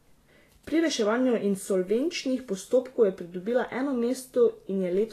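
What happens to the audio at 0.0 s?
Right from 0.0 s the speech carries Vorbis compression damage, and it runs the whole clip. Nothing comes through above about 14.2 kHz, and the treble just under that is grainy and hissy, with consonant attacks smeared. That's likely a low-quality Vorbis encode, which fits something around 34 kbps: the treble gets quantised so coarsely that its fine detail turns into noise of similar energy. The damage is plainly audible.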